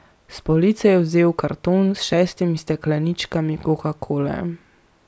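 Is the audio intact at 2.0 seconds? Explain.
Yes, the audio is intact at 2.0 seconds, with no dropout, click, distortion or other fault audible at that point in the speech.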